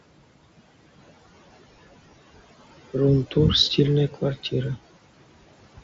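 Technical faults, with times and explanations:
Throughout, noise suppressor artifacts: the suppressor pulls the steady room hiss down by about 19 dB in the gaps, then lets it swell back under each phrase, so the background pumps with the speech. Unlike a noise gate, which cuts the whole signal abruptly, the level shifts band by band. The pumping sits on the noise floor rather than in the grainy, 7.7 kHz-limited Bluetooth band.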